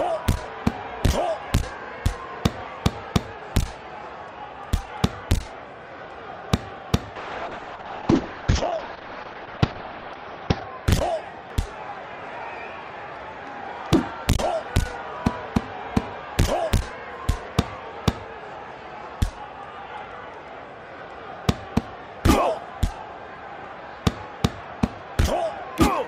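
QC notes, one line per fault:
7.16–10.91 s: call bitrate drop. The sound turns coarse and watery and loses everything above 6 kHz, which fits the encoder falling from about 32 kbps to around 7 kbps. Unlike packet loss, it stays continuous, with no gaps, until it recovers.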